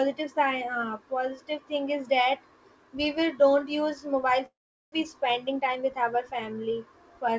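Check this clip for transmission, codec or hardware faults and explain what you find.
The speech shows two transmission faults, both from the network and jitter-buffer side of a call path whose band-limiting, with nothing above 8 kHz, fits a G.722 wideband codec.

Long network dropout, 4.46 to 4.94 s: the sound stretches into a fading buzz, then about 0.4 s of near-silence before resuming with material missing. This is likely a burst of lost packets that the receiver concealed by extending the last signal, with playout shifting around 70 ms.

Jitter buffer speed-up, 5.52 to 6.04 s: the speech runs about 9% fast at unchanged pitch and sounds hurried. The receiver trimmed short pitch-period segments repeatedly, removing roughly 50 ms in total to drain excess buffered audio.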